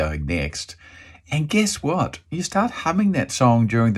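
Likely dropped samples: a tiny fraction of a millisecond goes missing at 0.96 s and 3.20 s, so the waveform jumps and each time leaves a sharp click.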